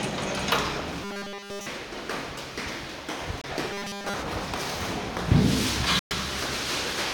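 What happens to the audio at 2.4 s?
Nothing goes wrong at 2.4 s: the sound carries on intact through that moment, with no dropout, click or distortion.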